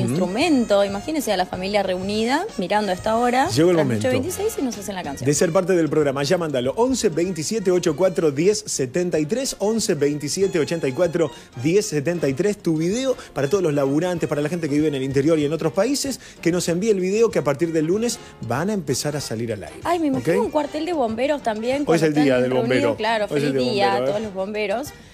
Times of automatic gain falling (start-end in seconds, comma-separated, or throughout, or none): none